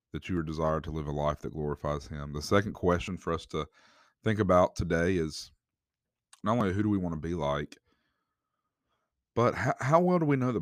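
Dropped buffers (overrun) in this speech clip at 0.37 s (between "that you" and "are desired to live"), 3.08 s (before "for us to think") and 6.61 s (before "who do we want") each make the sound jump ahead, skipping about 40, 20 and 10 ms. Audio was likely overwritten before being read, with no gap left between the joined sides.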